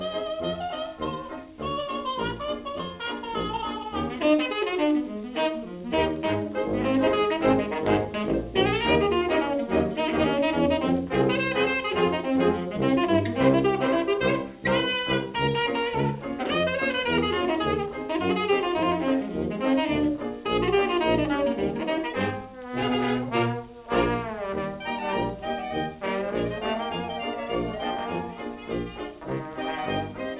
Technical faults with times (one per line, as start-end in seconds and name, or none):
none